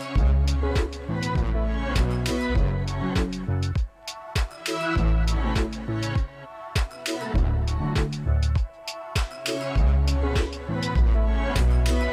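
No technical fault can be heard anywhere in the audio.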